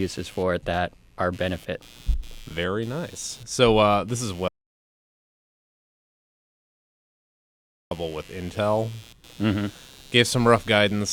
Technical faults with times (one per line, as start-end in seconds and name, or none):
0.00-11.12 computer activity noise
4.48-7.91 audio dropout to silence